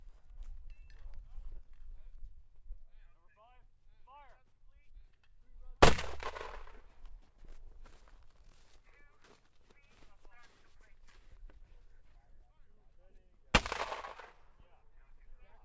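No technical faults are audible.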